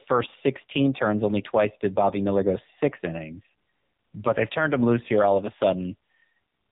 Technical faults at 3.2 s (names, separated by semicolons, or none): AMR narrowband mobile codec